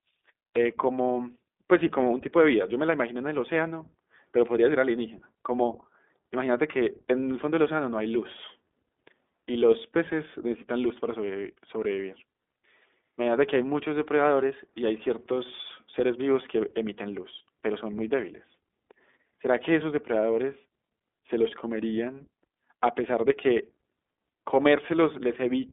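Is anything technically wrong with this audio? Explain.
Yes. Throughout, the speech shows iLBC codec damage: independently coded 20 ms frames give a rough, synthetic texture, band-limited from 250 Hz to 3.6 kHz, with nothing above 3.8 kHz.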